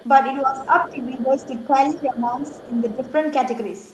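From 0.0 to 0.05 s, and again at 0.58 to 0.67, 0.83 to 0.9 and 2.55 to 2.68 s, the other side's voice leaks through faintly, roughly 25 to 30 dB below the speech. It shows as weak, separate harmonic traces on a spectrogram, likely residual echo the canceller missed. From 0.41 to 1.74 s and 1.9 to 3.13 s, speech is suppressed in double talk: the waveform envelope sags by up to around 10 dB as both sides overlap, likely the canceller ducking everything.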